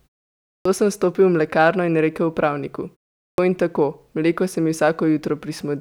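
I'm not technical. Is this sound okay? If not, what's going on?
No. Speech at 0.48 s and 3.18 s starts abruptly, missing its first 0.17 and 0.2 seconds. This clipped start after a pause happens because the playback device dozes during silence and wakes late.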